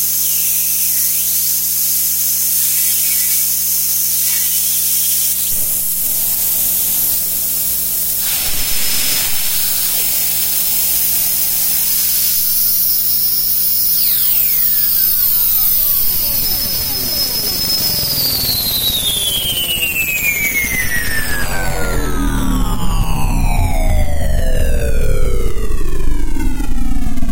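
A recording of everyday sounds carries mains buzz from start to finish: a steady, raspy tone locked to a 60 Hz supply, roughly 25 dB below the sounds. Unlike a smooth low hum, its switching spikes spread harmonics up into several kHz, pointing to a dimmer, rectifier or missing shield.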